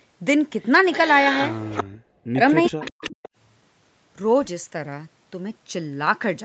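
From 0.92 to 1.84 s a faint delayed copy of the speech trails the talker by about 0.39 s, roughly 10 dB below it. This is an echo leak, likely from a far-end loudspeaker whose echo canceller let some of the microphone pickup return. The same echo comes back from 2.64 to 3.29 s.

Between 1.96 and 2.41 s the speech sinks sharply, by something like 40 dB at its deepest, and again from 2.68 to 3.25 s, overlapping that second echo. This is speech suppressed in double talk, likely because the canceller could not separate the talker from the echo and attenuated both.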